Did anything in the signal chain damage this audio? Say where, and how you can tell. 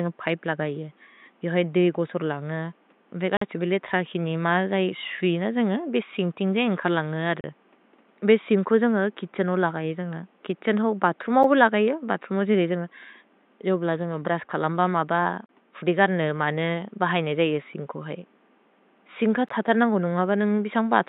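Yes, there's a gap between stream segments at the streaming and playback stage. Hard-edged silent holes hit at 3.37–3.41, 7.41–7.44 (after "जै एन्ग्कर् लन्ग हर"), 11.43 (after "जेन्ग कित्छेन् हो बतुर्म"), 15.46–15.49 and 19.49 (after "सिन् क"), every 4 seconds. Segment timestamps don't quite meet, so the player pads 9 to 46 ms of silence, and no audio is lost.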